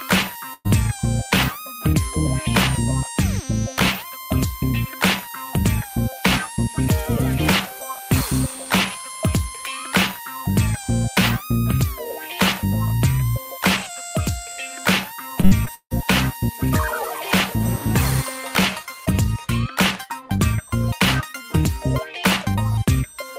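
At 0.53 s a burst of packet loss hits the stream: a run of packets goes missing or arrives too late, and the receiver invents about 113 ms of audio by extending the last sound while lowering its level, then fades into roughly 30 ms of near-silence. When playback picks up again at 0.67 s, about 120 ms of the original sound has been skipped, so the audio jumps forward after a brief smeared tail and dropout.

From 15.41 s to 15.92 s the stream suffers repeated packet loss, producing a robotic sound. Packets drop out four times in quick succession, the longest gap about 159 ms. Each hole is patched by stretching the preceding audio, and about 42 percent of this half-second span is concealment rather than real signal. Around 220 ms of sound is lost outright, leaving a choppy stutter with pieces missing.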